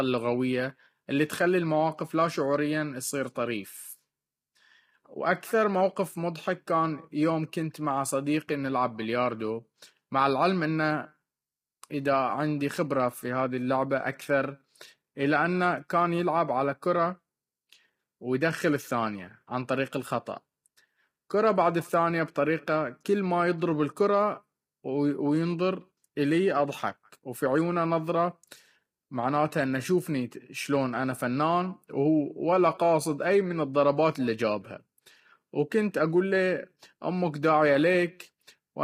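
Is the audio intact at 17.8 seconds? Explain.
No. At 17.8 seconds the speech sounds rough and grainy, with a hiss-like noise filling the gaps between the voice's harmonics and a thin, artificial-sounding top end. This runs through the whole clip. It is likely low-delay AAC compression, the AAC-ELD codec used for video calls. Its short frames separate pitch harmonics poorly and spend more bits per second, so at a rate the heavy damage suggests is around 24 kbps, detail is lost and replaced by noise.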